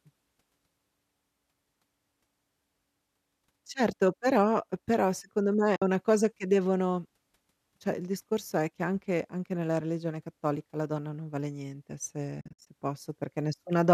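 At 5.76 to 5.82 s, AAC frame loss with muting leaves a soft-edged 60 ms hole. The lost frames were decoded as silence, and the overlapping windows fade the sound out and back in. On a waveform, the envelope tapers smoothly to flat. On a spectrogram, a blank vertical band spans all frequencies.

From 12.41 to 12.67 s, the same loss recurs as several gaps scattered over 260 ms, totalling 170 ms, the longest about 70 ms. It sounds like a stuttering dropout, shown as a comb of tapered blank stripes. The short frames point to the likely cause being low-delay AAC, which here leaves only light coding damage.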